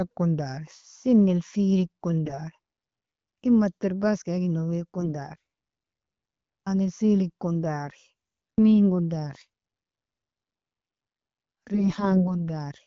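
AMR bit errors, at 2.25–2.39 s, 4.98–5.14 s, 7.86–7.90 s and 11.74–12.30 s: flipped bits in weakly protected frame data misplace excitation pulses, turning the speech briefly hoarse, scratchy and gargly.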